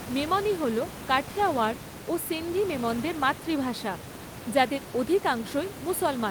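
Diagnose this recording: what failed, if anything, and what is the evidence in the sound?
Nothing failed here; the speech comes through intact at every stage, with just some ordinary room noise in the background sitting about 11 dB below the voice, which belongs to the recording space rather than to any part of the chain.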